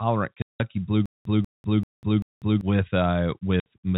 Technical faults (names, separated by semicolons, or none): packet loss filled with silence; stutter with silent gaps